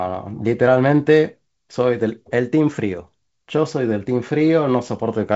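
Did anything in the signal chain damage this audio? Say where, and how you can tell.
No, nothing in the signal chain damaged this speech. The audio went through G.722 wideband telephone coding at 56 kbit/s, so nothing sits above 7.7 kHz and there is light hiss in the upper band, with the lower band slightly noisier from having fewer bits at this rate.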